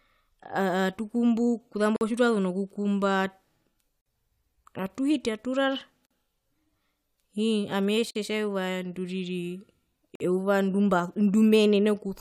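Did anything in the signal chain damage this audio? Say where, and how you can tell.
Yes, there's a gap between chunks, most likely at the streaming or playback stage. The speech cuts to hard-edged silence for about 48 ms at 1.96, 4.01, 6.06, 8.11 and 10.15 s, right before "tjitwazu nokukumba" and just after "atuhiti aturara". That steady spacing means the audio is handled in 2-second blocks, with each new block probably starting a little late. So nothing's actually missing, it's just pushed back at every join.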